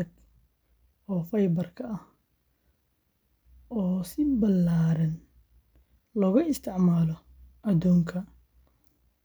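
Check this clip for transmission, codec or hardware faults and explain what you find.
No faults turn up on checking this clip.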